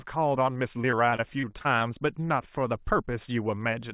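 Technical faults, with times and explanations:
0.82–1.83 s, repeated packet loss (robotic sound): nine short gaps, the longest about 26 ms, each patched by stretching the previous sound. About 17% of the stretch is concealed. The quick succession of patched holes makes the speech choppy and robotic.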